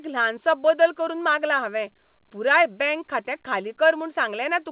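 No technical faults can be heard in the speech, which comes through a narrowband call path with nothing above 4 kHz.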